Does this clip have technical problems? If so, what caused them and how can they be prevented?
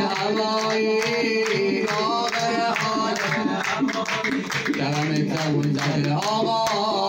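No, nothing technical jumps out here, so there's nothing to trace back or guard against.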